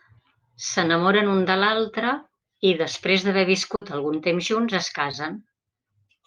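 At 3.75 to 3.83 s a burst of packet loss leaves about 60 ms of speech missing. The receiver extends the last sound and fades it. On a spectrogram, the frozen sound dims, then the audio resumes with a jump.

From 5.11 to 5.15 s there is a short concealed packet loss. About 20 ms never arrived, and the decoder patched it by continuing the preceding sound and blending back. It is heard as a brief smear, with smoothed, blurred partials.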